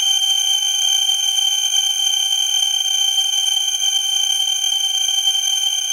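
A gritty, inharmonic fizz rides on the louder and brighter moments throughout, the mark of crude rate conversion by sample dropping, consistent with 48 kHz converted to 44.1 kHz, with the error roughly 15 dB below the sound.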